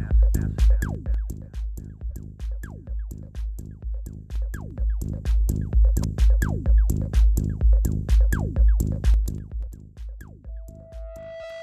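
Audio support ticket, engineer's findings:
Zipper noise: ticking on level moves at 0.65–1.49 s (down about 15 dB), 4.18–5.67 s (up about 15 dB), 9.08–9.80 s (down about 20 dB). Gain stage stepping 3 dB at a time with no smoothing.

Compressed frames skipped: skips at 2.09–2.13, 6.02–6.04, 9.66–9.69 and 11.43 s. Jumps of roughly a tenth of a second at 2.09 s, a bit over that at 11.43 s, and tiny ones at 6.02 and 9.66 s. Decoder dropping missing or damaged frames.

Loudspeaker feedback squeal: 658 Hz tone from 10.48 s to the end, swelling over about a second to roughly the program level. The mic is hearing its own speaker, with loop gain above one at that frequency.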